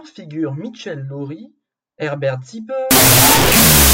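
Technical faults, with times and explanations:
2.91 to 3.93 s, wrong sample width: samples were read with the wrong byte count, which fits 32-bit float data taken as 16-bit integers. Most values splice mismatched bytes, so loud noise buries the speech, which plays at half speed, an octave lower.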